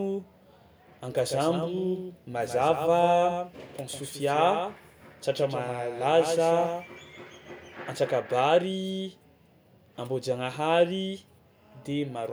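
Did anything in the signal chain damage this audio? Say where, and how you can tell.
Yes: a doubled audio track from 1.16 to 7.74 s. A dry copy trails about 150 ms behind, about 5 dB quieter, with abrupt edges. The likely cause is a slower second capture path.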